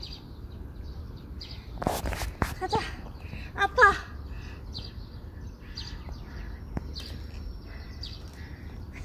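No technical faults are audible anywhere in the sound.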